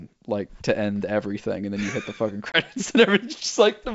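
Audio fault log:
2.52–2.58 s: packet loss on an ADPCM call. A hard-edged 20 ms silence, about one packet, then the speech returns with brief, slight distortion. The G.722 decoder's predictor and step size have lost track of the sender's and need tens of milliseconds to resync. That slow recovery is what separates it from a clean PCM dropout.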